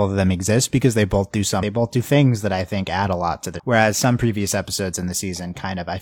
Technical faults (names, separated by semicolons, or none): damaged data in a compressed stream